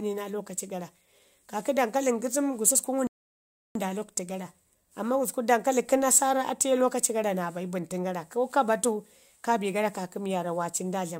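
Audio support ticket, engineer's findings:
Rebuffering stall at 3.07–3.75 s. Speech cuts to silence after "gususku ngum". Resumes at "nda lakwtu" exactly where it stopped. No audio lost; about 0.68 s added. Component: playback buffer. It ran dry and waited for more downloaded data.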